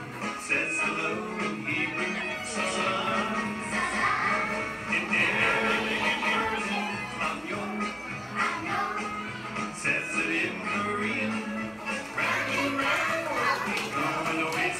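From 2.64 s to 6.44 s the sound is a doubled audio track: a second, full-band copy trails the original by around 200 ms at roughly equal loudness, likely from the same signal reaching the mix twice through paths of different latency. It sounds like a dry, flat slapback with no decay or room tone, switching on and off abruptly. A spectrogram shows every feature repeated a fixed distance later, and the waveform shows duplicated envelopes with hard edges at both ends.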